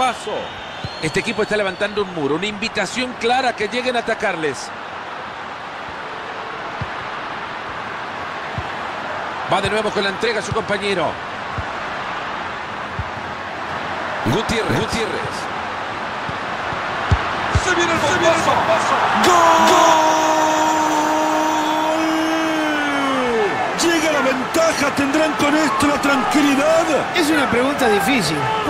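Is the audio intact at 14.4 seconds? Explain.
No. A doubled audio track runs from 13.69 to 19.93 s. A second, equally loud copy trails about 0.4 s behind, likely from a slower parallel capture path.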